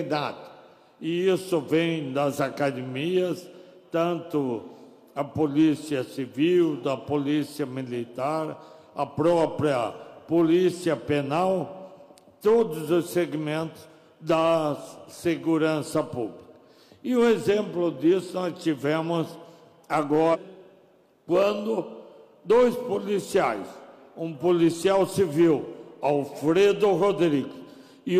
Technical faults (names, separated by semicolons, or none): stream segment skipped